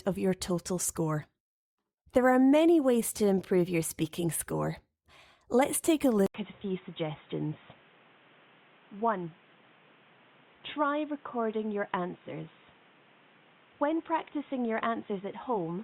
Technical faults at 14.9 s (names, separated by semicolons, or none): input switched to a poorer device